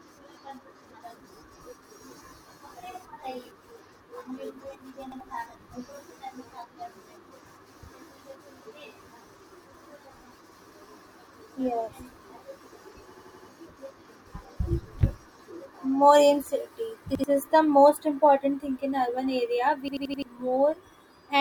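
At 5.12 s and again at 17.15 s the speech stutters once as a repeated buffer: an 85 ms slice plays twice, with a hard join, because fresh audio arrived late and the device reissued its last block, which fits a 4096-sample buffer. At 13.14 s and 19.88 s the same slice repeats four extra times, a longer machine-gun stutter. Unlike a dropout, the gap is filled with identical copied sound, not silence, so about a tenth to a third of a second goes missing.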